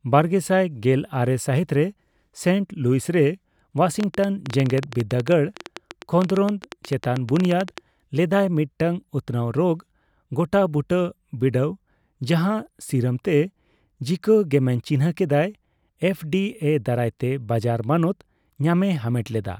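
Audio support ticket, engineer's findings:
Train of clicks, 4.00 to 7.79 s. About forty near-identical pops at roughly 11 per second, irregular spacing, peaking around 10 dB above the speech. Likely cause: electrical interference from nearby equipment or a faulty connection or power supply injecting pulses. Differs from clipping crackle: clicks persist through speech pauses and ignore signal level. Differs from dropouts: added pulses, no gaps in audio.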